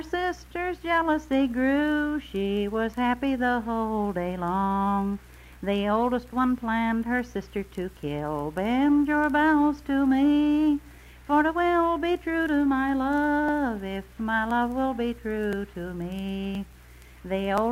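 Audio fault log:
12.47–17.58 s, periodic USB or driver dropouts: about seven brief ticks spaced 1.02 s apart. Each time, a background task stalls the USB bus or audio driver, and a few milliseconds of sound are skipped outright. The abrupt splice clicks only while signal is present.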